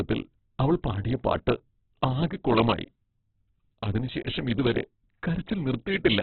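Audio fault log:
throughout Opus compression: the encoder was likely starved of bits, and the heavy damage fits a rate near 8 kbps in its CELT music mode. Nothing survives above 4.4 kHz, so the speech is narrowband and muffled, while band filling makes what remains rough, noisy and grainy.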